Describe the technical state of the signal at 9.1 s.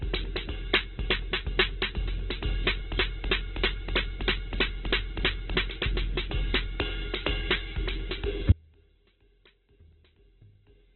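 At 9.1 s the music is inside an audio dropout to a faint residue. It runs from 8.52 s to the end. The signal cuts off abruptly, but the path stays live. Only a faint leak remains, roughly 30 dB below normal, which points to a likely lost feed.

The same moment also carries Opus compression damage. Nothing is heard above 4.1 kHz, so the band is narrow. Tones sound noisy, rough and grainy, because bands are filled with folded or noise content. This fits a very low bitrate near 8 kbps.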